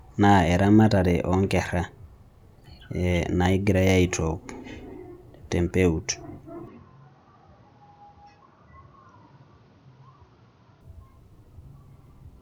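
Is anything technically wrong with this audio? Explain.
Yes. Input switched to a poorer device, from 6.68 s to 10.81 s: the speech abruptly loses its top end, with nothing above 6.6 kHz, which is most likely the recording jumping to a different, narrower-band microphone mid-take. There is no gap at the switch and the level stays roughly matched, so it comes across as a sudden dulling of tone. A faint new background noise sits far beneath the speech. At 10.81 s the full bandwidth returns.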